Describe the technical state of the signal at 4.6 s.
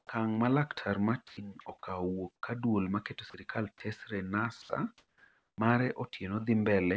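From 4.62 to 4.69 s, about 70 ms of speech gives way to a brief patch of steady, featureless noise before the speech resumes. This is likely sound dropped by the voice detector: the sender judged the speech to be background, stopped transmitting, and the receiver filled the gap with comfort noise. Unlike packet-loss concealment, nothing of the preceding sound is stretched or repeated, and unlike a hard dropout, the gap holds low noise rather than dead silence. As elsewhere on the call path, nothing sounds above 8 kHz, consistent with G.722.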